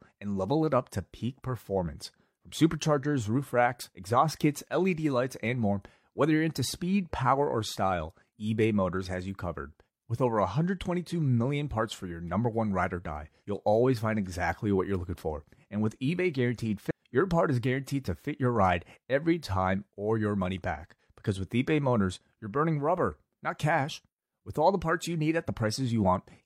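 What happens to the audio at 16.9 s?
At 16.86 to 16.91 s the speech jumps forward, losing roughly a third of a second. This is compressed frames skipped: a run of about seven encoded frames was either missing or rejected by the decoder as damaged, so playback resumed further on. The jump matches frames of about 46.4 ms.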